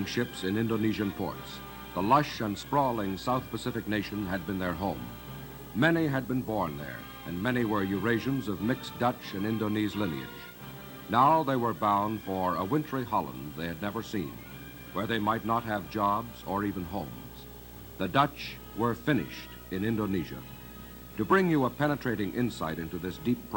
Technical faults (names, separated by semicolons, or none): video or display buzz